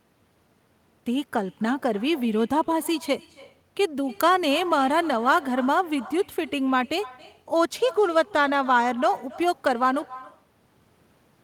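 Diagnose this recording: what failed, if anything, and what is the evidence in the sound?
Call processing failed. The fault is echo with no canceller, present throughout the speech. Each phrase returns roughly a third of a second later as a faint copy, about 21 dB below the direct sound. The copy is thinner. The far end plays the call on a loudspeaker, and its microphone sends it back. Nothing cancels it, so the round trip is heard. The smooth fade-out, ending at 10.07 s, takes the echo down with it.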